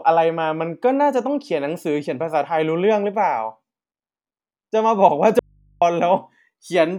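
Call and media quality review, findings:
Audio dropout to a faint residue, 5.39–5.82 s: likely input path losing the signal while staying live; speech cuts abruptly for 0.42 s, leaving only mains hum far below speech level.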